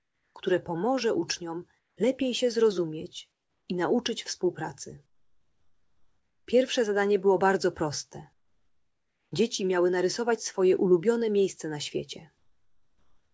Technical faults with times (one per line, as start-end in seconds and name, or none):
0.00-0.35 comfort noise in place of the background
1.79-1.97 comfort noise in place of the background
3.32-3.68 comfort noise in place of the background
5.06-6.47 comfort noise in place of the background
8.33-9.32 comfort noise in place of the background
12.38-13.33 comfort noise in place of the background